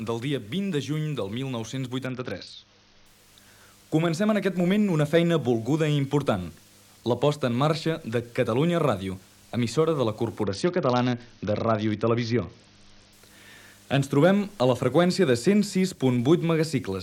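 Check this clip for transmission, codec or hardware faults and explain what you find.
Two stretches of Bluetooth SBC bit pool drop, at 2.06 to 3.06 s and 10.43 to 13.13 s. The link apparently starved, so the encoder cut its bit allocation. The loss is consistent with a bit pool falling from 28 to 7, near 66 kbps. Upper sub-bands got few or no bits, and the rest were coarsely quantised. The treble goes dull under a gritty hiss. On a spectrogram the high bands vanish abruptly and speckled noise fills the band, then recovers.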